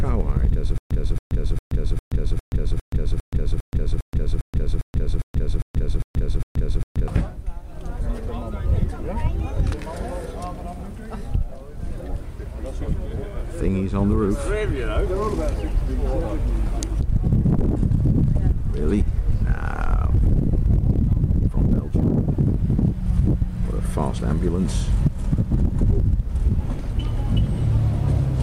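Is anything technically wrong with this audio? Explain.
Yes. From 0.78 to 7.08 s there is a stutter with silent gaps. Playback likely stalled, and each retry replayed the last fragment. A 276 ms burst returns 15 times with 127 ms of digital silence between, every 403 ms, and the intended sound is lost.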